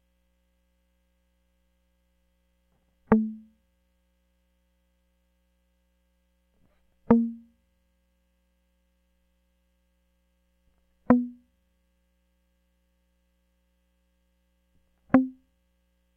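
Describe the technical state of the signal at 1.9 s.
At 1.9 s the music plays through intact, with no dropout, distortion or other technical fault at that moment.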